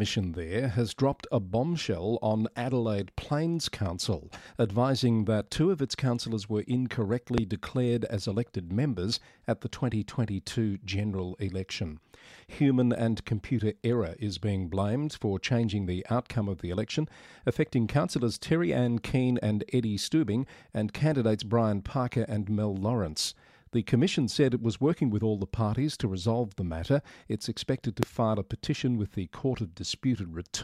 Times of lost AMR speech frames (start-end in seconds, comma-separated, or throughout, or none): none